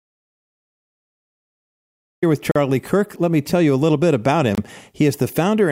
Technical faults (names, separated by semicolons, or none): audio dropout to silence; Bluetooth stall